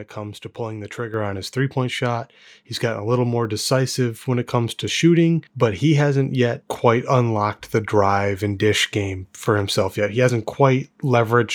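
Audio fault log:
1.14 s, microphone volume stepped up: the level rises by about 6 dB in a single step and then holds at the new setting. The change is applied to the device's input gain ahead of any processing, so the voice and the background noise floor jump together by the same amount. This is the signature of automatic input-level control in the call software raising a microphone it judged too quiet, rather than the talker moving closer.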